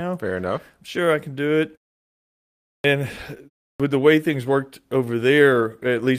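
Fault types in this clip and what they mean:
Clock drift between sender and receiver: The sending end's clock runs slow here, roughly one and a half percent behind the receiver. The receiver's jitter buffer keeps draining as it plays out faster than the audio arrives, so it has to stretch things to avoid running dry. That mismatch runs through the whole clip and is the root of the small timing wobbles you hear.
Repeated timing corrections: From about 1.05 s to 5.54 s the receiver keeps repeating short slices of audio to compensate for the slow sender. Playback runs at effectively 98 percent speed, adding around a tenth of a second in total. The edits all push the same way but land at uneven spacing.
Clipped start after a pause: The output device drops into a sleep state during silence and needs a moment to wake back up, so the onset of the next sound gets eaten. It happens at 2.78 s, after a pause of about 1.1 s, losing 62 ms, and again at 3.73 s, after only about 0.3 s of quiet, losing 67 ms. 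Both times the speech jumps in abruptly with its leading edge missing.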